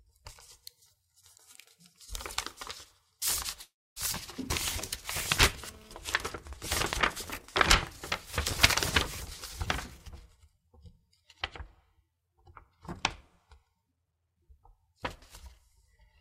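Around 3.61 s the audio stalls in a call audio freeze. The last bit of sound gets stretched into a short fading buzz and then goes quiet for roughly 280 ms, before picking up right where it left off at 3.98 s. Nothing is lost, but about 0.35 s of extra gap is added. The likely cause is packets held up in transit, so the jitter buffer ran dry and the receiver had to fill the wait.

Almost right after, at 4.12 to 4.15 s, there's a skip ahead, which pays that delay back the rough way. Roughly a fifth of a second of sound is simply thrown out, and the two sides are stitched together with only about 10 ms of fill. The result is an abrupt jump forward rather than a pause. That fits the jitter buffer dropping audio that had piled up behind the stall.

From 5.62 to 5.97 s a GSM phone buzz cuts in. It's a hard, raspy 217 Hz buzz loaded with harmonics, sitting about 24 dB below the main signal and having nothing to do with it. 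It comes in as a burst rather than a steady drone, which is what a nearby 2G phone does during a data transfer. The audio circuitry rectifies the radio pulses and turns them into audible buzz.

From 10.10 to 11.24 s there's a jitter buffer speed-up. The receiver had more audio queued than it wanted, so it trimmed lots of tiny pitch-period-sized slices in a row, roughly a tenth of a second in total. Playback runs about 8% fast while keeping the same pitch, so that stretch comes across as hurried.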